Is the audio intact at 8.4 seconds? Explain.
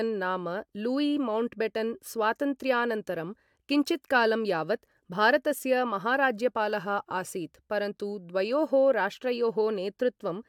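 Yes, the audio is intact at 8.4 seconds, with no dropout, click, distortion or other fault audible at that point.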